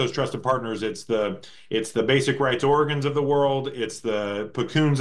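Nothing in this one stands out as a technical fault, so there's nothing to point to anywhere along the way.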